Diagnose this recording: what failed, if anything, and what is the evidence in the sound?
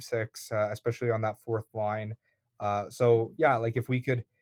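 Nothing failed, and there is no evidence in the sound of a fault at any stage of the recording.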